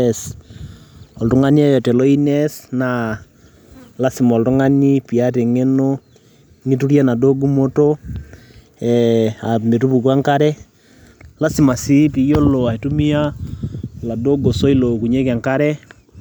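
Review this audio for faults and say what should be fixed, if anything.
Nothing to fix: no faults found in this speech recording.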